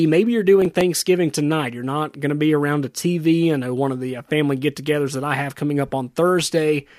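From 0.62 to 0.81 s the speech breaks into processor overload crackle: a handful of very short buffers, each well under a millisecond, miss their deadline and are skipped. It sounds gritty and torn, showing as hard-edged waveform gaps and thin vertical broadband streaks.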